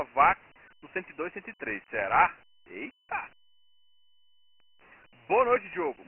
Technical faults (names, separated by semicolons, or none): Dialogic VOX ADPCM